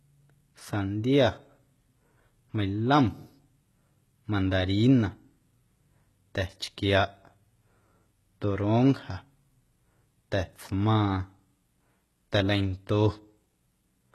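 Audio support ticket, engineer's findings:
HE-AAC compression, throughout the clip. Treble above the crossover sounds synthetic, with gritty, lispy s sounds and metallic sibilance. Nothing above 12.3 kHz. Likely cause: spectral band replication copying lower bands upward under a coarse envelope, so harmonics misalign at the crossover. Heavy damage fits a low bitrate near 16 kbps.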